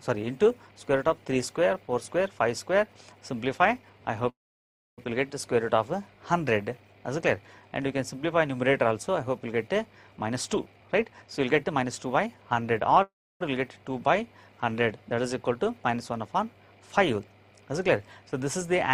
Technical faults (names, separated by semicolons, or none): call audio freeze; jitter buffer speed-up